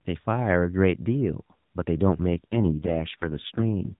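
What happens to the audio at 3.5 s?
An AMR rate drop covers 3.5 s, running from about 2.52 s to 3.96 s. The mobile codec switches to a much lower bit rate, consistent with a fall from AMR-NB's 12.2 kbps mode to its 4.75 kbps mode, so fewer pulses describe each frame. The narrow telephone band stays the same and nothing drops out, but the speech turns rougher, buzzier and more synthetic than the lightly coded stretch before it.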